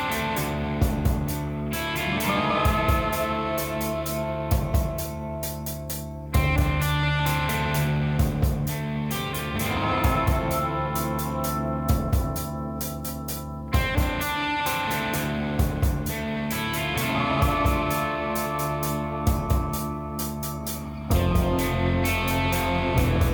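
No technical faults can be heard anywhere in the clip. Nothing in the audio points to a problem in how it was captured, processed or delivered.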